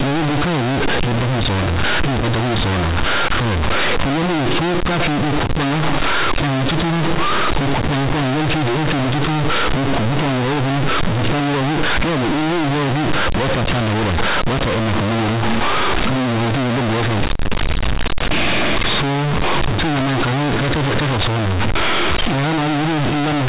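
Throughout, companded audio is read as linear. Mu-law bytes play as raw 8-bit samples. The speech becomes loud, buzzy distortion, with harsh noise in pauses.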